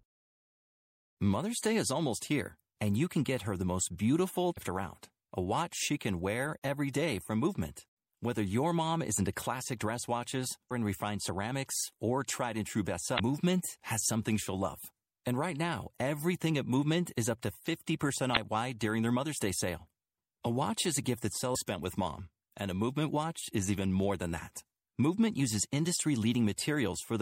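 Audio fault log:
Throughout: MP3 compression. The speech has a watery, swirly quality with dulled treble and smeared consonant attacks, likely from MP3 encoding at around 64 kbps, where the encoder runs short of bits, cuts high frequencies and drops weak spectral lines that flicker between frames.
4.54 s, 10.67 s, 13.16 s, 18.33 s, 21.51 s: damaged data in a compressed stream. Each is a brief chirp or blip lasting about 40 ms. The first comes after "her the most beautiful" and before "around a watch she", the third after "or tried and true", and the last after "is a gift that" and before "spent with mom and". Corrupted bytes in the encoded stream make the decoder misread frames and lose sync, so it briefly produces garbage and then resumes at the next valid frame header.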